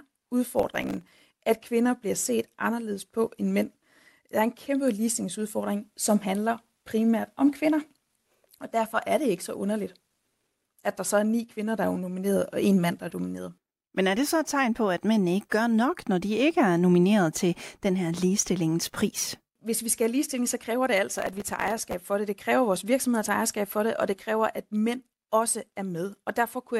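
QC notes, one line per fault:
0.59–1.30 s: processor overload crackle. For about 0.7 s a gritty tearing rides over the speech. The processor is failing to fill very short audio buffers, around a millisecond and a half each, before they are due. Each miss replays a scrap of stale audio with hard edges, and dozens of these in quick succession merge into a dense crackle that stops once the load eases.
21.14–21.94 s: processor overload crackle again, slightly longer at about 0.8 s and with a few more missed buffers. The same stale-audio repeats produce the same rough, tearing texture over the speech until processing catches up.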